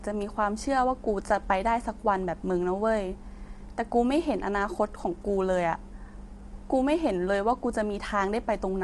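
All the way through, the speech sounds plainly rough and grainy, with noise filling the gaps between harmonics and nothing above 11.6 kHz. That's likely low-delay AAC compression, AAC-ELD at a rate that fits 32 kbps, whose short frames can't resolve pitch harmonics cleanly.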